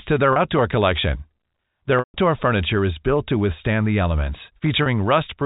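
Packet loss with pitch repetition occurs at 0.33 s before "outdoor collection", 1.99 s before "furniture is built to", and 4.83 s. The brief 30 ms losses sound like a held, buzzy note; the 150 ms gap fades to silence, not an abrupt dropout, over telephone-band G.711 audio.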